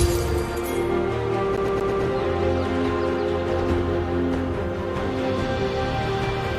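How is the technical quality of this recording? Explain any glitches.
One glitch stands out. From 1.56 to 2.03 s the CD is stuck on one turn: a scratch keeps throwing the laser back, so the same 0.12 s snippet repeats four times, each separated by a brief mute. That fast, evenly spaced stutter sets it apart from irregular dropout glitches.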